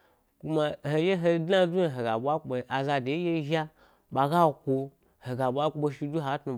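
No audible technical faults.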